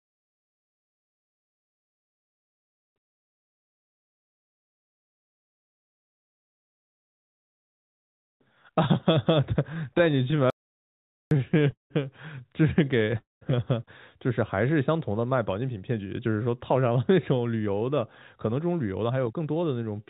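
From 9.74 to 11.92 s the audio has repeated stalls (stutter). Packets arrived late again and again, and the jitter buffer kept running dry. About thirty short holds were filled by stretching the last sound, the longest 191 ms. The sound drags and stutters, but nothing is lost.

Inside that stretch, from 10.50 to 11.31 s, there is an audio dropout to silence. For 810 ms the sound stops dead. There is silence, with no room tone underneath. Then it resumes mid-flow. The likely cause is the input dropping out while silence was written. That part of the audio is gone.

At 13.18 s a call audio freeze lasts until 13.43 s. The last sound is carried on as a brief buzz, then fades to silence for about 170 ms. The likely cause is held-up packets emptying the jitter buffer. The audio then continues where it stopped, 232 ms later. Nothing is missing.

Two jitter buffer speed-ups follow. From 15.61 to 17.98 s the audio runs at 110%, and about a fifth of a second is trimmed out. 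From 18.45 to 19.63 s it runs at 112%, losing roughly 0.15 s. Tiny pitch-period slices are cut to shed excess delay. Pitch stays steady, but the pace sounds hurried. Throughout, the G.711 call path leaves nothing above 4 kHz.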